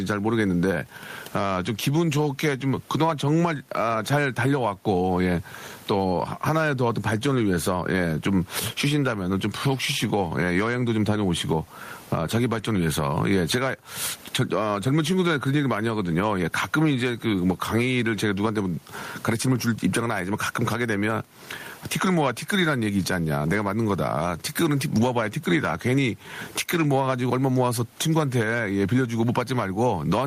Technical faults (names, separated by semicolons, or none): gain pumping